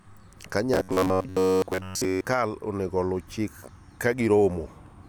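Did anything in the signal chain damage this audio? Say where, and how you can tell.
Yes: robotic sound from repeated short buffers, likely a starved driver buffer. From 0.74 to 2.24 s, before "onego oluw chik", speech becomes a rigid 93.8 Hz buzz, consistent with repeats of about 11 ms.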